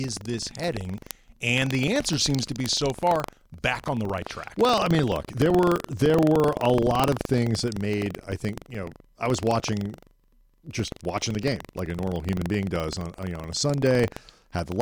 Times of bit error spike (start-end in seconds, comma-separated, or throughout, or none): 0.98, 2.66, 5.78, 7.04, 11.79